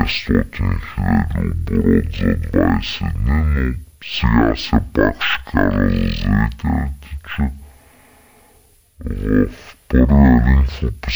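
From start to finish, stereo is read as mono. The interleaved left and right samples are played in sequence as one channel, so the speech runs at half speed and an octave low, 12 semitones down, with a faint mirrored image in the upper spectrum.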